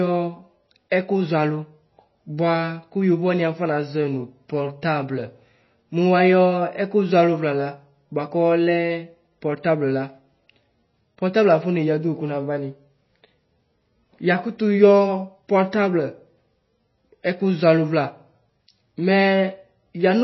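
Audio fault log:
Throughout, MP3 compression: the speech has nothing above 5.8 kHz and a plainly audible watery, swirling texture, with metallic chirps on s sounds. A starved encoder likely cut the treble and toggled weak frequency lines between frames, which fits a 24 kbps stream.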